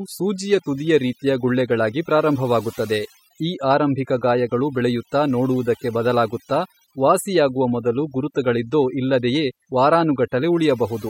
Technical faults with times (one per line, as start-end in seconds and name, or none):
0.00-11.09 overdone noise removal